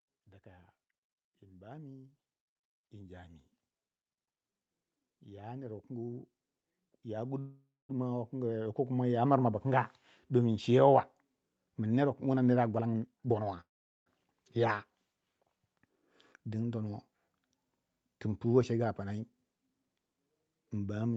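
From 0.43 to 3.41 s, then from 5.24 to 9.26 s, just before "mirma bu", automatic gain rising lifts speech and background together by about 6 dB and then about 13 dB. It is a slow swell, not a sudden jump.

From 7.39 to 7.92 s the speech is stretched into a fading buzz and then about 0.2 s of silence. This is a call audio freeze, likely caused by packets held up in transit. Speech resumes where it stopped, so nothing is lost; the gap just delays everything after it.

After "wukin wuna mere a", from 12.80 to 13.57 s, a jitter buffer speed-up runs speech at 145% with the pitch unchanged, trimming roughly 0.4 s to cut the built-up delay. Unlike a freeze, it hurries the speech instead of pausing it.

A second call audio freeze follows at 13.61 to 14.09 s, mostly silent for about 0.4 s.

A milder speed-up, at 110%, returns from 16.74 to 17.34 s.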